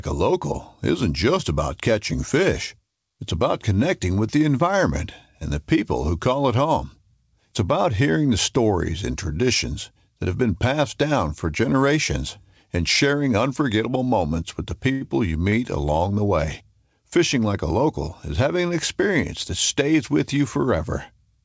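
A short stall from a late packet hits twice: at 14.92 to 15.04 s the jitter buffer ran dry and the sound was held for 89 ms, then at 15.50 to 15.55 s for 19 ms. Each time nothing is lost, but the held sound drags with a faint buzz or dip, over a call path that stops at 8 kHz.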